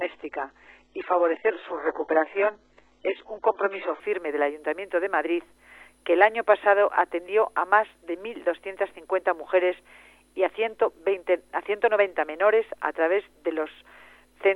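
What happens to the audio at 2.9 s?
At 2.9 s the audio is still in an adaptive stream starting at a low bitrate, which lasts from 0.0 to 4.0 s. The dull, smeared sound with synthetic-sounding treble and strong codec artefacts fits a very low-bitrate HE-AAC start. On a spectrogram nothing shows above 9.4 kHz until 4.0 s, when a wider band appears abruptly with no gap in the waveform.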